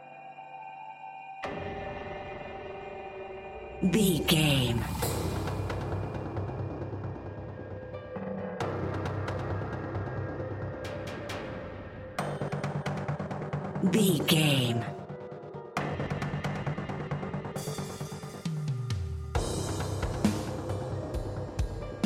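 Right at 0.50 s there's a single sharp click, with a thin vertical line through the spectrum. That's most likely dropped samples: a couple of samples went missing, so the waveform jumps straight to a later value. The gap is a tiny fraction of a millisecond, far too short to lose any sound.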